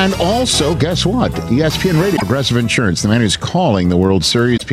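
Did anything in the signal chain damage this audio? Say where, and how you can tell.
Yes. The fault sits in the codec stage: damaged data in a compressed stream. Brief garbled bursts appear at 2.13 to 2.23 s and 4.53 to 4.62 s. Each lasts under 0.1 s. The decoder misreads the corrupted frames, loses sync, and resumes at the next valid header.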